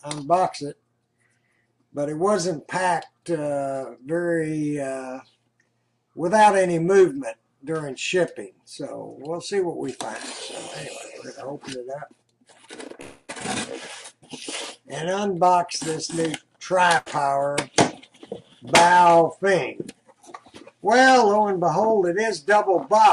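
At 13.01 to 13.31 s a call audio freeze fills about 270 ms with a fading continuation of the last sound, likely from delayed packets draining the jitter buffer; the audio resumes intact. From 15.42 to 16.81 s a jitter buffer speed-up trims pitch periods, around 70 ms in all, running about 5% fast at unchanged pitch. At 16.98 to 17.08 s a burst of packet loss replaces about 80 ms with a fading continuation of the last sound before the audio jumps ahead past the missing part.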